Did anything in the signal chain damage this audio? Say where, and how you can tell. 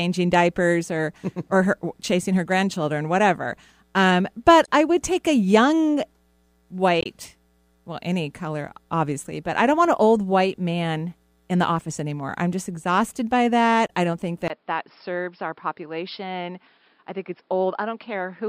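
Yes. Three brief glitches cut through the speech, at 4.64 to 4.68 s, 7.01 to 7.06 s and 13.88 to 13.90 s, each lasting 26 to 48 ms. That points to the codec and storage stage: damaged data in the compressed stream. Corrupted bytes made the decoder misread those frames, lose sync and skip ahead to the next valid frame header.

From 14.48 s to the end, the sound turns dull and boxy after a 20 ms gap. Nothing is left above 5.3 kHz, the level drops by about 5 dB, and a new noise floor sits roughly 40 dB under the speech. A sudden, lasting change in bandwidth, tone and noise at one instant suggests the recording chain likely switched its input to a poorer device, such as a headset's call profile or a different microphone.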